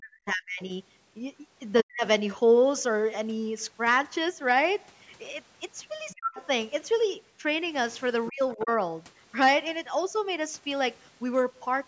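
From 0 to 0.62 s the speech drops sharply, by about 40 dB. It happens again from 1.83 to 2.04 s. This is speech suppressed in double talk. The likely cause is an echo canceller that heard both sides at once and turned the talker down too.

At 6.09 to 6.19 s a faint second voice leaks through, about 25 dB below the speech. This is the other side's voice leaking through. The echo canceller likely left some loudspeaker sound in the microphone. It is brief.

From 6.17 to 6.37 s the speech is suppressed again, dipping by about 40 dB. The leaked voice returns at 6.35 to 6.44 s, about 25 dB down. The two alternate in quick scraps.

From 8.29 to 8.69 s the speech dips by about 25 dB. Within that, from 8.5 to 8.66 s, the other voice leaks through about 20 dB below the speech.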